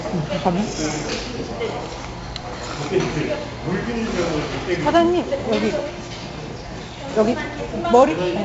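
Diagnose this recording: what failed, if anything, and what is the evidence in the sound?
Codec stage: 4-bit ADPCM compression, heavy, leaves gritty hiss riding every loud sound and nothing above 7.7 kHz, which fits a 64 kbps stream.

Buffer stage: overlapping chunks, so 12 ms replays at 2.42 s and 5.43 s, 3 s apart, since each chunk starts before the previous ended.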